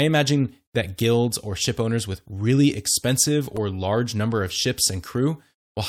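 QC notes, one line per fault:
0.99 s and 3.56 s, damaged data in a compressed stream: brief glitches just before "guilds or ship owners" and between "owners with really expensive" and "large number of", where corrupted frames make the decoder lose sync and hunt for the next valid frame header.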